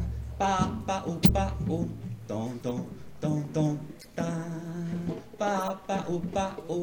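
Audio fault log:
1.22–1.31 s, 2.68–2.73 s, 4.01–4.07 s, 5.54–5.70 s: corrupt frame decoded. Short chirp-like noise bursts spanning a few damaged frames each, with bit errors misplacing spectral energy. The first burst is loudest (near -10 dBFS), the last moderate (around -20 dBFS), the middle two faint (around -30 and -35 dBFS).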